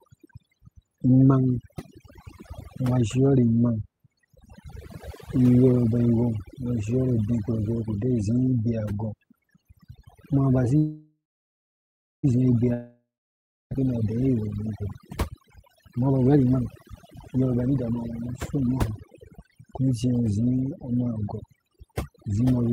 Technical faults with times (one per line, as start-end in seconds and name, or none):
0.00-22.73 overdone noise removal
10.77-12.25 call audio freeze
12.73-13.85 long network dropout
15.36-22.73 jitter buffer speed-up